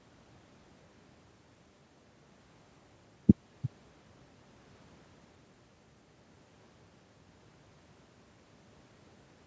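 No technical faults are present in the speech, which carries the ordinary marks of call microphone processing: the lowest bass is trimmed by its high-pass filter and the band stops at 8 kHz.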